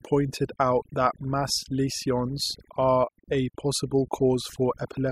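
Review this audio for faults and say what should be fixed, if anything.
A noise reduction stage was set too aggressively, producing overdone noise removal across the whole clip: frequency bands near its noise estimate are cut to almost nothing, and quieter parts of the speech vanish with them, leaving near-silent gaps with twinkling specks. Set the reduction depth lower and tune it by ear on a noise-only section before processing the speech.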